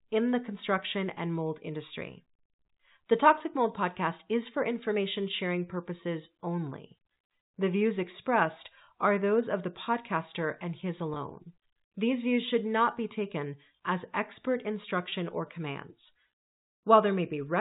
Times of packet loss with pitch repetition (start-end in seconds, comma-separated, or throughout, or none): 3.38-3.40, 11.14-11.16, 15.10-15.12